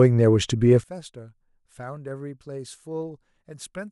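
From 0.84 s to the end, the speech drops by about 21 dB. The centre of the sound falls away. What remains is a faint residue. This is the signature of one channel inverted. The likely cause is one stereo channel with reversed polarity. When the two channels are summed to mono, everything they share cancels. Only their small differences survive.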